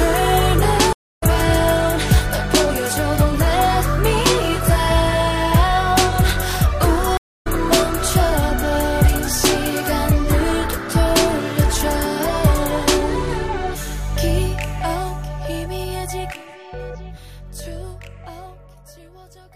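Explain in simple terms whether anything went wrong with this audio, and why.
Twice the sound drops out in a stream reconnect, at 0.93 to 1.23 s and 7.17 to 7.47 s. The connection broke, leaving about a quarter-second of silence, then the player restarted mid-stream, picking up roughly a fifth of a second further on, so a little is skipped.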